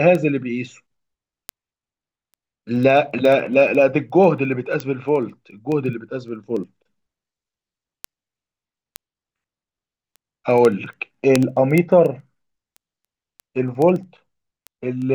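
From 0.15 s to 15.09 s, word clock ticks recur roughly every 70 ms: an unlocked receiver clock drifting by roughly 300 ppm drops or repeats single samples, producing steady sharp ticks.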